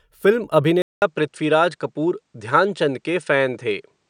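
At 0.82 s the recording's source likely changed, with the input switched to a poorer device that carries the speech to the end. A gap of about 200 ms of silence marks the switch. Afterwards nothing above 9.6 kHz comes through, so the speech loses its airy top and sounds duller and boxed in. A faint new background noise sits well beneath it, while the overall loudness stays about the same.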